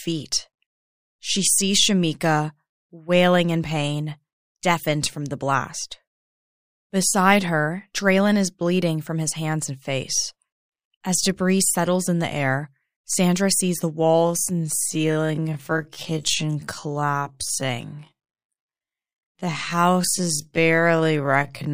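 From 14.17 s to the end, the speech turns into a time-stretched section, likely from software slowing it to about 0.55x speed while holding pitch. The pace drops abruptly, and the speech drags.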